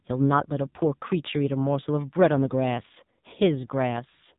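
From start to finish the speech carries the sound of the AMR narrowband mobile codec, heavily degraded. On a spectrogram everything stops abruptly near 3.8 kHz, leaving a flat empty band above. The codec rebuilds the voice from a vocal-tract model fed with sparse pulses, and the harsh, buzzy, synthetic texture fits one of its low modes, around 6.7 kbps. Harmonics look smeared and blocky in 20 ms steps, and the speech sounds thin and boxed-in.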